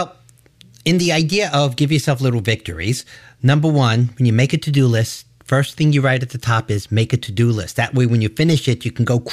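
No technical faults can be heard anywhere in the recording; the signal stays continuous and intact throughout.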